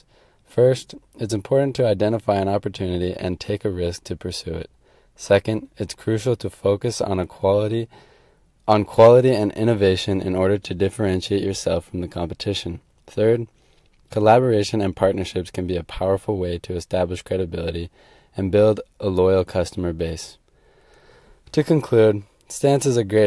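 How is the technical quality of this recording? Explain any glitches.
No glitches turn up anywhere in the recording; the speech signal stays continuous and stable throughout.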